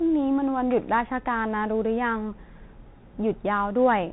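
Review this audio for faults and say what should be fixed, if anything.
Muffled, band-limited speech with scratchy s sounds and a granular hiss throughout: the Bluetooth CVSD headset codec, cutting everything above 4 kHz, which fits a 64 kbps link. Record with a wideband microphone path instead of the headset's narrowband hands-free profile.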